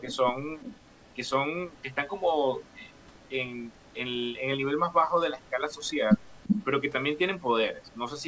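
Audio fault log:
Throughout: computer activity noise. A faint buzz with a pulse rate of roughly 300 per second sits far below the speech. It comes from processor, graphics or mouse load shifting the ground shared with the audio circuit. Unlike a steady mains hum, it follows the machine's workload rather than a fixed 50 or 60 Hz pattern, and it does not rise or fall with the speech itself.
0.08–0.17 s, 0.59–1.12 s, 2.62–3.29 s, 3.73–3.94 s, 5.42–5.49 s, 5.82–5.90 s, 6.21–6.65 s, 7.84–7.96 s: echo leak. A copy of the speech returns 344 ms late, which is likely a far-end loudspeaker feeding its microphone past an incomplete echo canceller. It is about 20 dB down at first, about 25 dB down at 0.59 s, and about 40 dB down in most stretches. At 6.21 s it reaches about 5 dB below the speech. Room reverberation would trail smoothly, but here the fixed delay and intermittent pieces mark it as echo leak.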